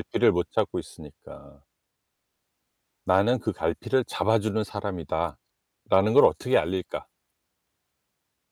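A stage in the chain was driven past its ceiling, so peaks were cut flat: hard clipping. At 0.59 s a brief overload of about 1 dB gives a crackle. From 5.94 to 6.25 s, about 2 dB over, the speech peaks crackle.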